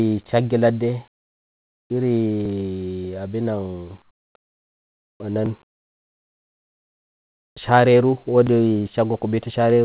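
From 1.12 to 1.9 s the background in a pause is replaced by a flat, featureless hiss about 12 dB quieter than the surrounding room sound. This is comfort noise in place of the background. The likely cause is discontinuous transmission: the sender stopped sending during the pause, where the background sat about 60 dB below the loudest speech, and the receiver filled the gap with synthetic noise shaped only roughly like the real room.

At 2.45 s there is a tiny click-like stutter where about 6.5 ms of audio plays twice. This is overlapping chunks: the audio was handled in blocks of 3.0 s, and each block began slightly before the previous one ended, duplicating a sliver at the join.

The comfort noise returns from 4.02 to 4.34 s, only about 4 dB down, and again from 4.42 to 5.2 s, where the drop is deeper at about 19 dB, so the room seems to fall away.

The same 6.5 ms repeat recurs at 5.46 and 8.47 s, exactly 3 s apart. 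Throughout, nothing is heard above 4 kHz, which fits a G.711 mu-law call path.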